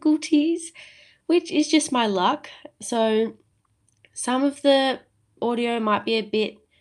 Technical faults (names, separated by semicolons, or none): clock drift between sender and receiver; repeated timing corrections